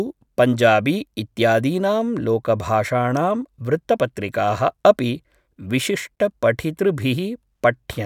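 Nothing in the recording stood out as a technical problem on listening.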